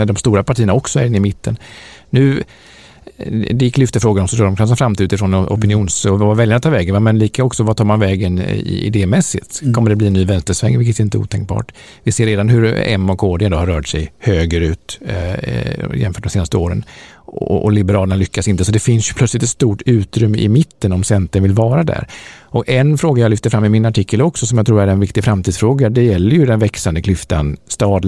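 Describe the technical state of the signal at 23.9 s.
At 23.9 s the speech signal is intact, with no fault audible at that point.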